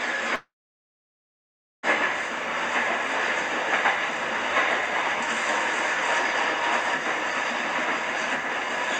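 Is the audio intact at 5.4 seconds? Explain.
Yes, the audio is intact at 5.4 seconds, with nothing breaking up or dropping out there.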